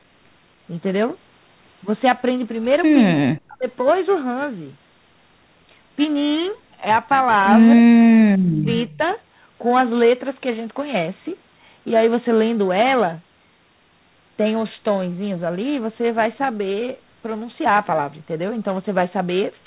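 From 3.14 to 3.68 s the speech sinks sharply, dropping by something like 40 dB in places, and it happens again more briefly at 7.77–7.92 s and 8.36–8.71 s. That pattern is most likely speech suppressed in double talk: with both ends talking at once, the echo canceller couldn't tell this talker apart from its own loudspeaker echo, so it turned everything down.

Right after, at 8.9 to 8.98 s, a faint scrap of the voice comes back about 286 ms late and roughly 30 dB below the speech. That's likely an echo leak. The far end's canceller didn't fully strip what its microphone caught from the loudspeaker, so a short, quiet copy slipped back through. The copy sits in the same narrow band as the rest of the call, with nothing above 4 kHz.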